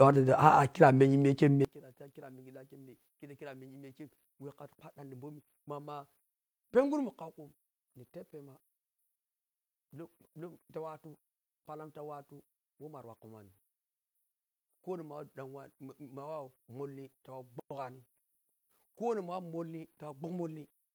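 From 1.65 s to the end, the speech played in mono drops by about 25 dB. The likely cause is one channel inverted, with reversed polarity cancelling the centred voice. Unlike a plain level drop, what survives is a faint residue of the channel differences.

At 17.60 s a silence of about 110 ms opens, ending at 17.71 s: a gap at a join of encoded pieces, where the start-up delay and final-frame padding of two encodings were left in. Unlike a dropout, the speech resumes from exactly where it stopped, with smeared edges.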